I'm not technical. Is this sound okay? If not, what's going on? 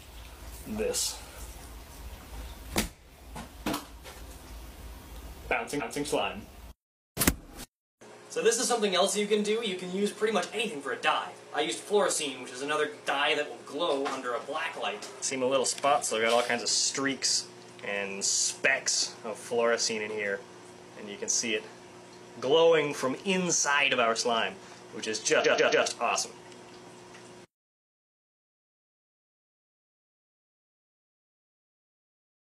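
No. There are two problems.

The first is clock slip clicks. From 0.31 s to 32.25 s, faint ticks come roughly every 0.4 s, about seventy in all. The likely cause is two devices running on slightly different clocks. Each time they drift apart by one sample, that sample is dropped or repeated.

The second is repeated frames. A stored chunk of sound was played again. At 5.76 s, a 232 ms piece plays one extra time. At 25.41 s, a 139 ms piece repeats three extra times, adding 418 ms. You hear a stutter.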